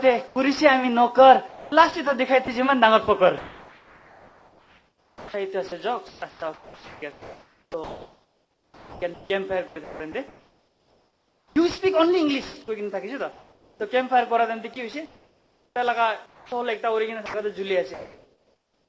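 At 0.28 s the sound gives way to steady noise for 80 ms, likely sound dropped by the voice detector, which misjudged the signal as background and stopped sending. From 1.48 to 2.48 s, 3.38 to 11.56 s and 14.74 s to the end, the audio turns choppy as sound chopped by the voice detector. Transmission likely switched on and off repeatedly, so fragments are replaced by synthetic fill. From 13.32 to 13.80 s, comfort noise in place of the background likely replaces the real ambience with featureless noise about 2 dB lower during the pause. Throughout, nothing is heard above 8 kHz, consistent with a G.722 call path.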